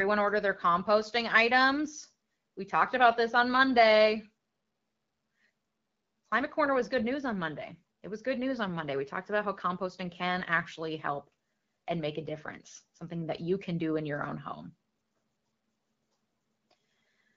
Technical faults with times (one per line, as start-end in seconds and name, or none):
none